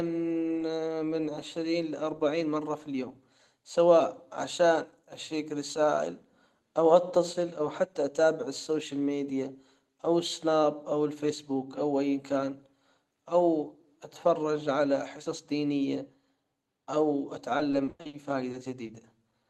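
From 17.57 to 18.15 s there is repeated packet loss, giving a robotic sound. Six gaps fall in this stretch. Together they total about 260 ms, nearly half of the span. The longest lasts 100 ms. Each gap is filled by stretching the last sound forward, and the next gap comes soon after. The speech turns choppy, with pieces missing.

Short concealed packet loss follows at 18.51, 18.83 and 18.87 s. The last two run back to back. Each hole is about 20 ms of audio that arrived too late to decode. The receiver fills it by continuing the previous sound, then blends back into the real signal. Each one is a brief smear or wobble. A short consonant can drop out there. The call path itself carries Opus coding, with a top end near 12 kHz.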